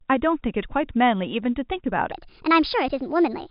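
A speech clip carried over telephone coding, its band stopping below 4 kHz as G.711 would leave it, has a section at the wrong speed. From 2.12 s to the end, playback runs 1.35 times too fast, so the speech turns hurried and rises by about five semitones. This is likely a resampling or clock mismatch in an edit or player. On a spectrogram, harmonics and formants jump upward and spread apart at 2.12 s, and the waveform's syllable envelopes shrink in time.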